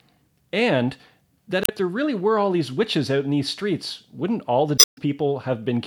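A short glitch breaks in at 1.62 to 1.70 s, just before "there really were all", and a longer glitch follows at 4.75 to 4.98 s after "streets wouldn't all the". Both are damaged data in a compressed stream: corrupted bytes make the decoder misread frames and lose sync until it finds a valid header.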